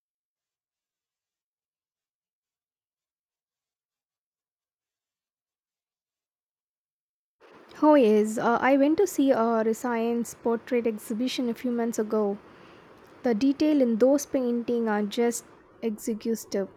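Nothing goes wrong anywhere in this bit of speech, so there's no technical fault to point to.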